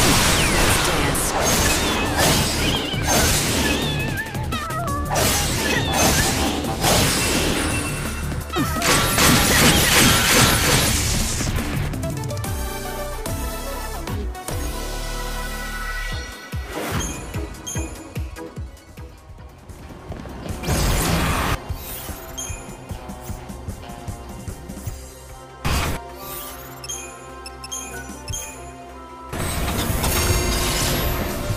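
From 9.18 to 11.88 s, a doubled audio track appears. An equally loud copy trails by roughly 300 ms, likely from a second, slower capture path. It cuts in and out abruptly.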